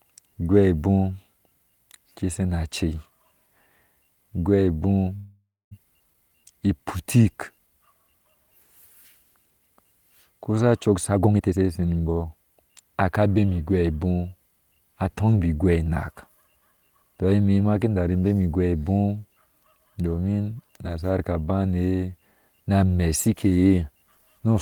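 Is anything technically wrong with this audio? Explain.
Yes. This speech clip has four timing faults.

From 5.15 to 5.73 s there is a call audio freeze. The audio stalls for about 0.56 s, which likely comes from packets being held up until the receiver's jitter buffer ran dry. The receiver carries the last sound on as a fading buzz or hiss, and the final 0.22 s are silent. When the audio resumes, it continues from where it stopped, so nothing is lost and only a gap is added. On a spectrogram the last spectrum smears out horizontally, decays, and ends in a blank strip.

At 6.13 s there is a skip ahead. Roughly 150 ms of speech is dropped, either in transit or by the jitter buffer when it overflowed. The two sides are joined almost directly with only a tiny fill, so the speech jumps forward. In the waveform this looks like an abrupt splice with no pause. The spectrogram shows formant tracks that jump discontinuously instead of gliding.

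From 6.22 to 7.57 s there is a jitter buffer slow-down. The receiver rebuilds its reserve by repeating single pitch periods many times, which adds 150 ms. Playback runs at about 89% speed while the pitch stays the same. Vowels sound drawn out. On a spectrogram the harmonics stay at the same frequencies while the syllables stretch. The waveform shows runs of near-identical repeated cycles.

From 10.94 to 12.32 s there is a jitter buffer speed-up. Too much audio had built up in the buffer, so the receiver cut short pitch-period pieces again and again, removing roughly half a second. The speech plays at about 139% speed at unchanged pitch and sounds hurried. In the spectrogram the syllables and pauses are compressed in time while the harmonic spacing stays put. The waveform shows shortened voiced segments with small seams between them.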